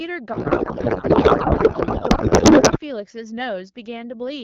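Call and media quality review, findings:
Codec payload misread, 0.33 to 2.79 s: receiver parsing AMR frames with the wrong packing, likely octet-aligned payload read as bandwidth-efficient. Fields land in wrong positions; speech replaced by garbled noise and warble barely tracking it. Clears once packing agrees. Outside that span the codec sound points to AMR wideband (HD Voice) at about 12.65 kbit/s, with light coding damage.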